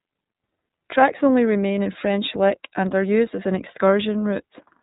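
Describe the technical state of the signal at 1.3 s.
At 1.3 s the speech passes through the iLBC codec, as it does throughout, coding each 30 ms frame independently at what sounds like 13.33 kbps; nothing above 3.8 kHz survives, leaving it muffled, rough and plainly synthetic.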